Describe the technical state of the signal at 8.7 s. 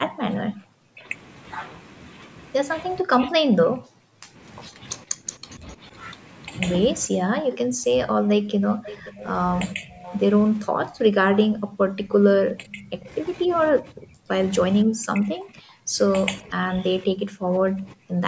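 At 8.7 s the talker sits inside a stretch of speech suppressed in double talk, 7.07 to 10.03 s: likely the echo canceller choking on overlap, so the voice drops away by roughly 40 dB in patches.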